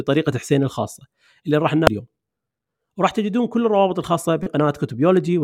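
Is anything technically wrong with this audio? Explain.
Yes. Damaged data in a compressed stream appears twice in this speech: a brief blip at 1.87 s and a longer glitch from 4.43 to 4.47 s. At those points the compressed data is corrupt, so the decoder misreads the affected frames, loses sync and hunts for the next valid frame header. The result is a short chirp, squawk, click or hole. On a spectrogram each event is a narrow vertical disturbance. The waveform shows an abrupt discontinuity.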